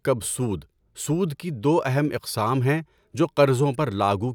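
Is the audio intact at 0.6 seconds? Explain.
Yes, the speech at 0.6 s plays through cleanly, with no dropout, click, distortion or other fault at that point.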